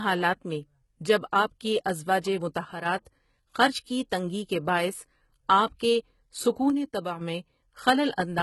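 Throughout, the speech carries the gritty, metallic treble of heavy HE-AAC compression, likely at a bitrate near 16 kbps. A spectrogram shows copied high bands with nothing above 11.8 kHz. At 2.73 s, right after "جب آپ کی ازواجِ", a sudden gain jump drops speech and background together by about 7 dB until 2.86 s, likely from an unramped digital gain change. The waveform steps down abruptly and back up. From 6.70 to 7.21 s a second jump lowers everything by about 6 dB, seen as another sharp-edged step in the waveform envelope.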